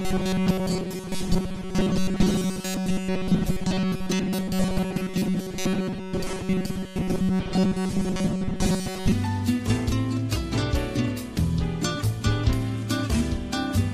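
From 0.01 s to 9.12 s the sound takes on a rigid, metallic buzz pinned at 188 Hz, a robotic sound from repeated short buffers that only loosely tracks the underlying audio. The likely cause is new audio arriving too seldom, so playback keeps looping a fragment of about 5.3 ms, which fits the 188 Hz buzz. Much of the stretch, roughly seven-tenths, is repeats, with the real audio skipped.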